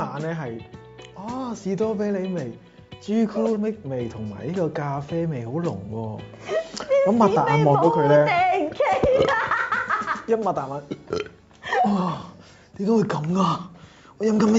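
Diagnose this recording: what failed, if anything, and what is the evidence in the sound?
Nothing stood out on listening; the top end stops at about 8 kHz, as expected for audio carried over a call path, and I found no failure at any stage.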